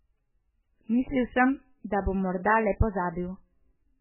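Throughout the speech, heavy MP3 compression is likely: nothing survives above 3 kHz, and weak detail swirls in and out. The damage fits a very low bitrate, around 8 kbps.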